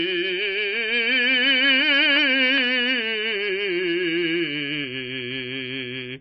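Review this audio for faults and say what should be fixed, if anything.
Across the whole clip the music sounds dull and boxed-in, with nothing above about 5.6 kHz, so air and the upper edge of every instrument are missing. This is most likely low-bitrate audio saved at a high bitrate. The cut-off and thinness suggest an original MP3 at a very low bitrate, around 23 kbit/s, later re-encoded as a much larger MP3, perhaps around 256 kbit/s. The second encode cannot restore what the first removed. To prevent this, source the music from a lossless or high-bitrate original and never upconvert a low-bitrate file.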